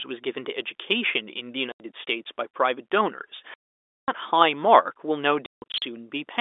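Packet loss filled with silence cuts dead holes into the speech at 1.72 s for 80 ms, at 3.54 s for 540 ms, and from 5.46 to 5.82 s in scattered runs, the longest 160 ms. The hard edges, with no smeared or repeated concealment audio, and gap lengths that fit 20 ms packets set it apart from a fade or dropout.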